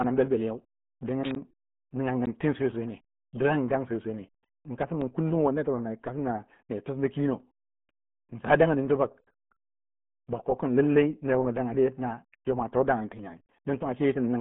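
From start to finish the speech sounds muffled and gargly, with nothing above about 3.8 kHz and a narrow band near 150 Hz to 3.4 kHz. This is RealAudio 14.4 codec damage, heavy throughout, which fits an 8 kbit/s dial-up stream.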